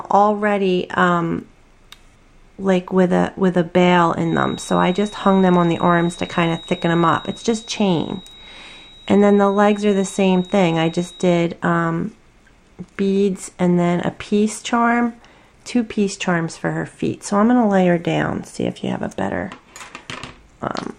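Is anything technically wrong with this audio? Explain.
Yes. A feedback whistle runs from 4.20 to 11.48 s, likely from a loudspeaker-to-microphone loop held just at the edge of feedback. It sustains one frequency near 3.8 kHz without running away, heard as a thin, steady tone about 25 dB under the sound that swells and fades slowly in level.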